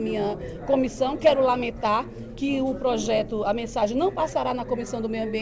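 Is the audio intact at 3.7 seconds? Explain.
Yes, the audio at 3.7 s is intact, with only the call path's ordinary band limit to nothing above 8 kHz, which fits a G.722 codec.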